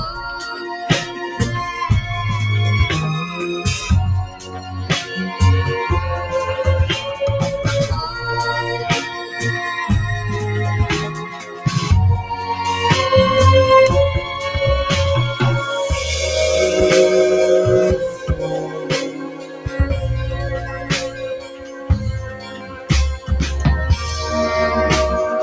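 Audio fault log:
throughout, noise suppressor applied to music or sounds: a suppressor designed for speech stays active across the clip and treats steady, held parts of the sound as background noise. Its gain keeps shifting by around 10 dB as it decides what to keep, so the level pumps and breathes instead of sitting still, and sustained material thins out while sharper onsets pass more intact. The call path's band limit leaves nothing above 8 kHz.
1.05–1.40 s, 4.27–4.78 s, 9.09–9.35 s, 11.12–11.66 s, 18.11–18.44 s, 18.60–19.83 s, 20.53–21.90 s, 22.20–22.90 s, sound cut by the noise suppressor: in each span the suppressor judges the sound as noise and pulls it down harder than the rest, by about 5 dB at 1.05 s and up to about 12 dB in the three late spans. Early dips last a few tenths of a second. From 18.60 s the cuts stretch to roughly 0.7 to 1.5 s, so held and fading sound sinks or is cut short.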